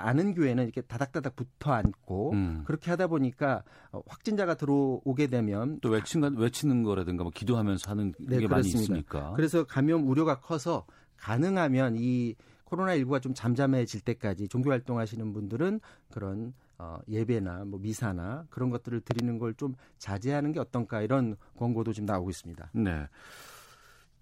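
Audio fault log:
1.85–1.88 s and 19.11–19.21 s, loud pop: a single sharp pop at 1.85 s, about 20 dB above the speech, and a double pop at 19.11 s, about 15 dB above it, with the speech continuing underneath both. The likely cause is a sudden voltage step or pulse from a plug, switch, static discharge or driver glitch, which the downstream circuitry shapes into a brief transient, heard as a pop or thump.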